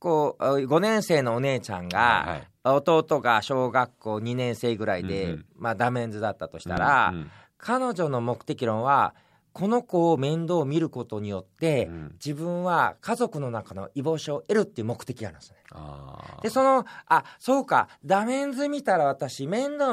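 A speech recording with a single loud pop from 6.77 to 6.80 s, sitting about 10 dB above the talking, which carries on underneath; likely a plug, switch or static spike.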